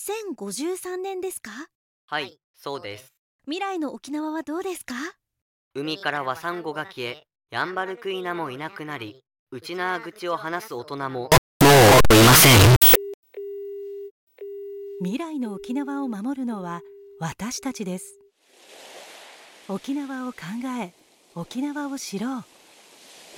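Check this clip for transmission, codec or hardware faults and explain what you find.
One fault stands out. From 11.32 to 12.95 s the sound becomes abruptly very loud and harsh, a near-square buzz sitting at an almost fixed, high level, with background noise as loud as everything else. This is float read as integer: likely 32-bit float samples taken as 32-bit integers, so the sign and exponent bits set the level, however quiet the original was.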